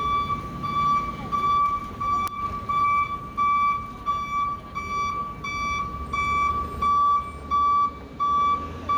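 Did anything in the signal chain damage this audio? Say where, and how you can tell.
Yes. Gain pumping runs through the whole clip: the gain swings by around 10 dB, so loud and quiet parts sit unnaturally close in level and the sound feels squashed. The likely cause is input gain set far too high at capture, with a fast limiter or compressor clamping each peak. On a waveform the envelope looks flattened.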